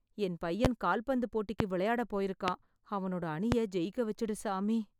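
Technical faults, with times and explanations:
0.65–0.68 s, 1.60–1.64 s, 2.48–2.51 s and 3.52–3.55 s: loud pop. Each event is a single sharp pop lasting about 33 ms and peaking roughly 20 dB above the speech, which carries on underneath. The likely cause is a sudden voltage step or pulse, for example from a plug, switch, static discharge or driver glitch, entering the chain. The downstream circuitry shapes that pulse into a brief thump.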